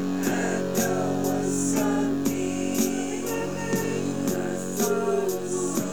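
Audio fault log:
Nothing to log here, as these sounds come through with no faults to report.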